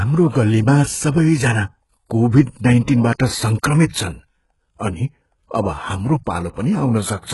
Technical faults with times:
0.00-7.33 HE-AAC compression
2.29-2.33 pre-echo
2.83-2.88 pre-echo
3.88-3.93 pre-echo

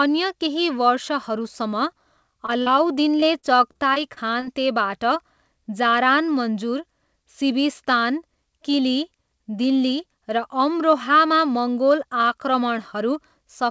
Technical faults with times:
2.46-2.68 short concealed packet loss
3.20-4.44 repeated packet loss (robotic sound)

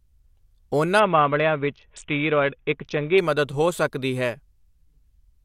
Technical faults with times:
1.00-3.18 Bluetooth SBC bit pool drop

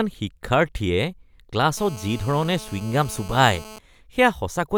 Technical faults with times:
1.77-3.79 GSM phone buzz

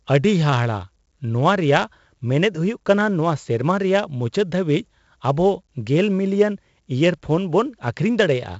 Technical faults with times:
0.00-8.59 4-bit ADPCM compression

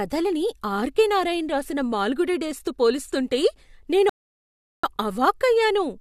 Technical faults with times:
4.09-4.83 rebuffering stall

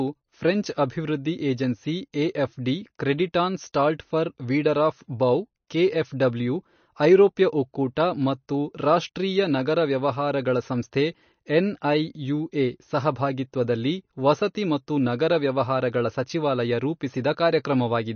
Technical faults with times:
0.00-18.15 MP3 compression

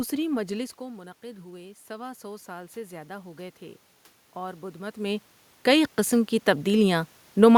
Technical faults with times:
0.78-3.66 automatic gain rising
4.34-7.53 automatic gain rising

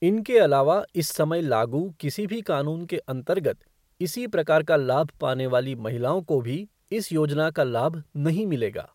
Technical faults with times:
none

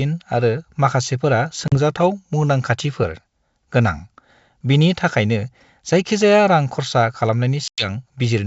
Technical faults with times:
1.68-1.78 packet loss on an ADPCM call
7.68-7.87 packet loss on an ADPCM call

